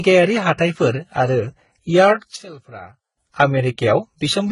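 The speech has likely passed through a chain of lossy codecs, a low-rate one first, then re-encoded twice more, ending in Vorbis. Each stage's artefacts stack: smeared, watery texture with swirly high-band detail, and nothing above 11.1 kHz throughout.

From 2.36 to 3.17 s, one stereo channel is likely polarity-inverted, so when the channels are summed to mono the shared, centred speech largely cancels. Level drops by about 18 dB, leaving only a faint residue until the sound returns.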